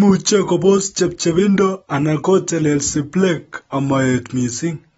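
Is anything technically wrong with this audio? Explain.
Yes. Throughout the speech, the audio shows clear damage that likely comes from AAC compression at a low bitrate. The encoder has discarded everything above about 7.7 kHz and quantised the remaining spectrum coarsely, which fits AAC-LC at roughly 24 kbps. The lost top end makes the speech sound dull and muffled. The coarse quantisation leaves a smeared, warbling texture, and sibilants come out fizzy instead of crisp.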